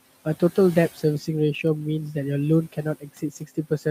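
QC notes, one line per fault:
3.0 to 3.23 s and 3.4 to 3.86 s, speech cut by the noise suppressor: it mistook quiet speech for noise and pulled it down about 14 to 16 dB, so bits sound swallowed.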